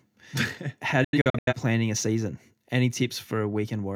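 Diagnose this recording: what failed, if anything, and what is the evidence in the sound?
Sound cuts to silence in several short holes between 1.04 and 1.53 s, before "planning a season": a digital broadcast dropout, where the receiver muted corrupted frames.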